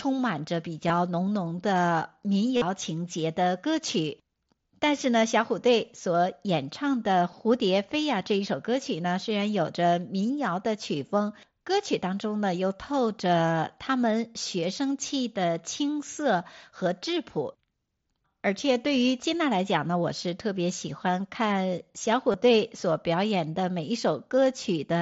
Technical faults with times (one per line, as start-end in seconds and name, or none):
0.88 concealed Bluetooth headset packet loss
2.57-2.62 concealed Bluetooth headset packet loss
22.32-22.34 concealed Bluetooth headset packet loss